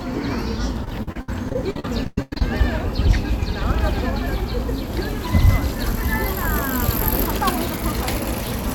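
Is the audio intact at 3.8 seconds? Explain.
Yes, at 3.8 s the sound plays through without any dropout, click or other break.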